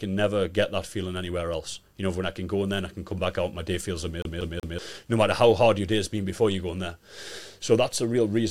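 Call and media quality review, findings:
Rapid even stutter, 4.22–4.79 s, after "out my day feels", before "no matter how hard": same 0.19 s fragment plays three times, brief mute at each jump. CD stuck on one turn: scratch throws laser back one track per revolution.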